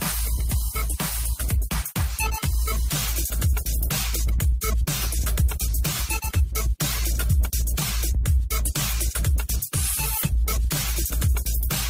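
Clock drift between sender and receiver runs under the whole clip. The sending end's clock is fast, by something like four percent, so audio keeps arriving a little quicker than the receiving side plays it out. Its jitter buffer steadily fills rather than drains, so nothing runs dry here. The receiver has to keep shedding material to stop that backlog from growing, and that pressure never lets up from start to finish.

You can hear that shedding as repeated timing corrections from about 0.36 s to 11.67 s. The receiver keeps snipping out short slivers of audio, always cutting and never repeating, since it's trying to catch up. The net effect is the sound moving at about 103 percent of its natural speed. The cuts come at uneven spacing, so instead of a clean speed-up you get small hiccups and a slightly rushed, unsteady pace.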